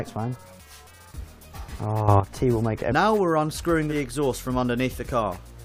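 A sudden gain jump occurs at 2.08 s and lasts until 2.2 s: the sound and its background noise rise together by about 9 dB from one sample to the next. This likely comes from a digital gain setting applied instantly, without any ramp.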